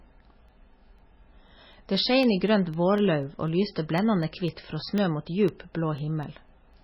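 From the start the speech sounds watery and swirly, with nothing above 5.5 kHz, likely heavy MP3 compression at a very low bitrate, around 17 kbps, starving the encoder of bits. From 0.23 to 6.74 s, ticks recur every 0.25 s, around thirty of them. These are periodic USB or driver dropouts, each replacing a tiny fraction of a millisecond with silence.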